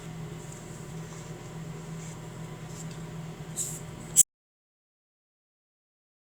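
At 4.22 s the sound cuts off abruptly mid-flow and the clip stays in silence for its final 2.03 s, with no room tone or background hiss underneath. This is an audio dropout to silence. The abrupt cut and the dead-flat gap point to the input signal being lost, likely through a disconnected device, a failed link or a stray mute, while the recorder kept writing silence, so whatever followed is gone.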